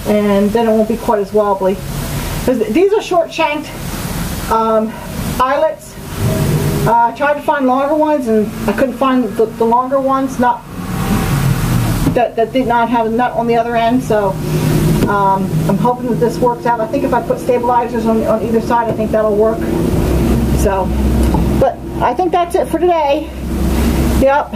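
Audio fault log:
Throughout, gain pumping: the level swings by roughly 25 dB, leaving loud and soft parts squashed close together. The likely cause is gain set far too high, with a fast limiter or compressor clamping it.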